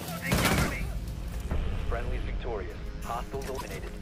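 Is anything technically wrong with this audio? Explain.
Yes. Damaged data in a compressed stream appears at 1.29–1.34 s and again at 3.57–3.61 s. Corrupted bytes there make the decoder misread frames and lose sync while it hunts for the next frame header, producing a brief chirp or blip of about 40 ms each time.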